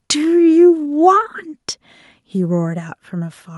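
Nothing in this short bit of speech trips anything up, so there's no fault to point to at any moment.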